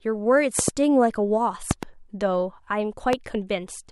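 A sudden voltage step, likely from a plug, switch, static discharge or driver glitch, is added to the signal path three times, producing a loud pop each time, peaking about 15 dB above the speech. Between 0.59 and 0.70 s, and again between 1.71 and 1.85 s, two pops land in quick succession. A single pop falls between 3.13 and 3.15 s. Each is a sharp thump on top of the speech, which continues underneath.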